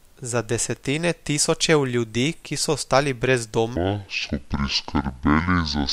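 From 3.76 s to the end, there's a section at the wrong speed: the speech drops to about 0.58 times its proper rate, so it turns slow and deep, close to ten semitones lower. It's likely a playback or edit clock mismatch dragging that stretch.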